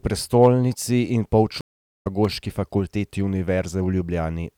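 At 1.61 s, just after "prestolnici in", a stream reconnect occurs: the connection dropped and the player had to re-establish it and restart decoding mid-stream. The speech goes silent for about 0.43 s and picks up around half a second further on, so that stretch of speech is skipped.

At 2.25 s there is an electrical switching spike, likely from a nearby switch, motor or static discharge arcing and coupling into the audio line. It is heard as a sharp snap laid over the speech.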